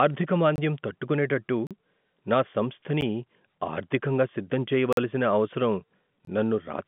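In this telephone-band speech clip, the program likely failed repeatedly to fill its output buffer in time, leaving blocks of digital silence: abrupt holes at 0.56–0.58 s, 1.67–1.71 s, 4.93–4.97 s just after "ఆర్ధికంగా సిద్ధం", and 6.25–6.27 s, and a tick at 3.01 s. Their 12 to 46 ms lengths fit buffers of 512 to 2048 samples.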